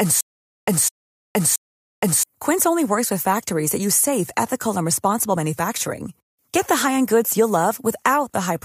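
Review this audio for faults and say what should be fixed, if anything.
Stutter with silent gaps runs from the start to 2.23 s. A 207 ms fragment repeats three times between 0.47 s silences, likely from a stalled stream. Buffer more audio before playback so the stream cannot run dry.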